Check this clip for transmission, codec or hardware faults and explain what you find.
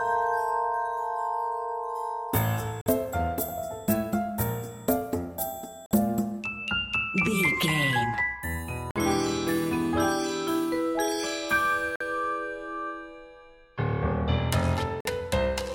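One fault is present: a gap between chunks, recurring five times, at 2.81, 5.86, 8.91, 11.96 and 15.00 s. The audio arrives in 3.0 s pieces with about 48 ms of silence inserted at each join. Unlike a dropout, nothing is removed; the sound stops with hard edges and resumes late, at a steady period.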